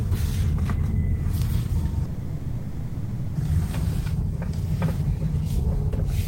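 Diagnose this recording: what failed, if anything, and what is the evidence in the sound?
Call audio freeze, 2.05 to 3.37 s: the sound smears into a fading buzz for 1.3 s, then resumes intact, likely delayed network packets starving the jitter buffer.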